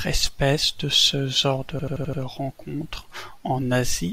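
After "de ce genre se" (1.79–2.22 s), a system hang loop from a frozen driver replays one 85 ms buffer five times, producing an 11.7 Hz stutter that shows as identical repeating waveform blocks.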